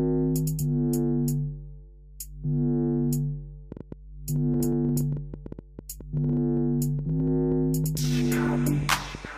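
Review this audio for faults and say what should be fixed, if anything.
From 3.72 s to 9.26 s there's a train of clicks: around forty similar ticks at about 7.6 per second, unevenly spaced and poking a few dB above the sound, likely interference pickup or a faulty connection or power supply. Fix it by isolating nearby equipment and checking the interface connection.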